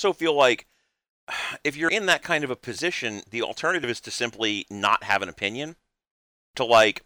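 Speech with three abrupt skips of roughly 50 ms, at 1.89 s after "if you're", 3.84 s after "of a position the" and 5.79 s after "not have an opinion": audio missing between chunks, likely lost at 2-second chunk boundaries.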